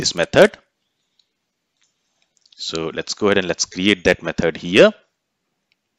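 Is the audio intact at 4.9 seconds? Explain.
No, hard clipping runs from 4.76 to 4.86 s: the peaks exceed what the signal path can pass by about 4 dB, so they are cut flat, adding a brief crackle.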